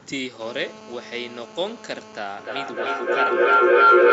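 A nearby 2G phone in an active call is being picked up by the audio circuitry in this speech recording: from 0.41 to 2.19 s its radio bursts, rectified 217 times a second, add a steady, raspy GSM phone buzz at 217 Hz, about 11 dB below the signal. Then two devices on the same call form an acoustic loop, and from 2.37 s to the end a feedback howl builds near 1.5 kHz, the loop repeating roughly every 0.3 s, peaking about 16 dB above the speech. Everything sits within an 8 kHz band, consistent with the Opus call path.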